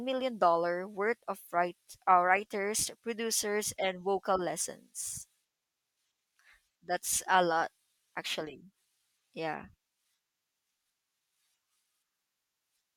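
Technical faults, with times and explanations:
No technical faults are audible.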